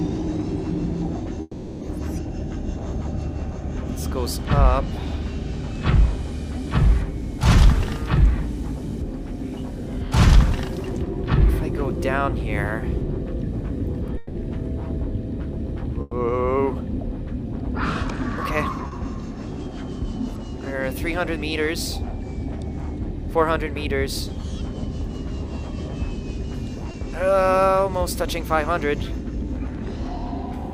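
At 1.41 to 1.83 s and 14.17 to 14.37 s, the sound freezes into a fading buzz or hiss, likely a long network dropout. Spectrograms show a smeared, decaying continuation before the audio resumes further on.

From 16.01 to 16.13 s, a burst of packet loss leaves about 100 ms synthesized: a continued sound tapering in the waveform, with that stretch missing.

Short concealed packet loss at 18.87 to 18.93 s and 26.91 to 26.95 s gives brief smears, visible as blurred spectrogram slivers where continuation blends back in.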